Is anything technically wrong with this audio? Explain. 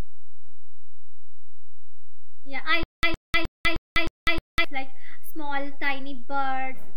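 Yes, there are two faults.

DC offset runs throughout: the whole waveform sits shifted from zero by a constant, wasting headroom and adding steady energy at the very bottom of the spectrum rather than anything audible.

Stutter with silent gaps from 2.83 to 4.64 s, just before "like small": a 112 ms fragment repeats six times, each followed by about 198 ms of digital silence (a 310 ms cycle), likely a stalled stream replaying its last buffer, losing the audio that belonged there.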